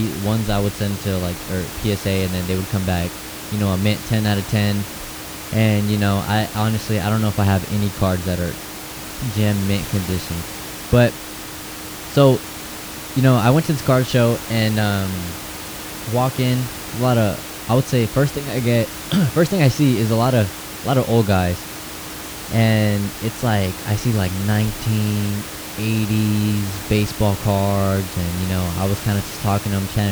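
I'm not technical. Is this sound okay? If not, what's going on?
Yes, nothing is wrong here.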